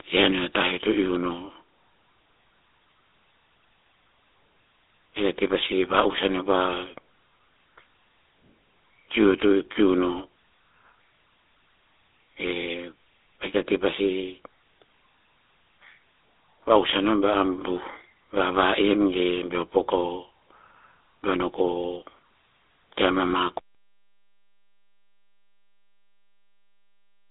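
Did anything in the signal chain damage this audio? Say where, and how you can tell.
Yes. The GSM full-rate codec damage runs through the whole clip, at the codec stage. The speech sits in a telephone band of roughly 250 Hz to 3.7 kHz, with nothing at all above 3.8 kHz, and it has a plainly audible buzzy, gravelly roughness, which fits a 13 kbps GSM full-rate stream. That codec rebuilds the voice from a vocal-tract model driven by regularly spaced pulses and keeps only every third excitation sample, which is where the grit comes from.

An audio dropout to silence starts at 23.59 s and lasts to the end of the clip. The speech cuts off mid-flow into silence, with no room tone or line noise underneath, so this is not a quiet passage. The source was likely lost upstream, through a disconnected input, a broken link or an accidental mute, while the recorder kept writing silence. Whatever followed 23.59 s is gone.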